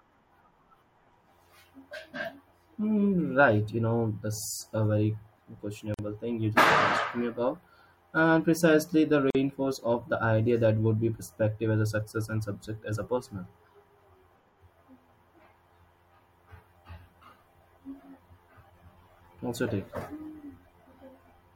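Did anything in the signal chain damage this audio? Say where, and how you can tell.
Yes. There is a gap at a join of encoded pieces, from the codec stage. Speech stops dead for 47 ms at 5.94 s, before "thing you", and for 45 ms at 9.30 s, between "precisely the" and "of the idea that". Separately encoded segments were joined untrimmed, keeping encoder delay and final-frame padding.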